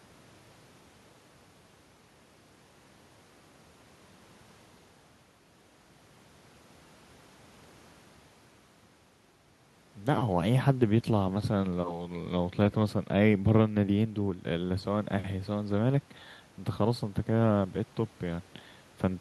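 No technical faults are audible.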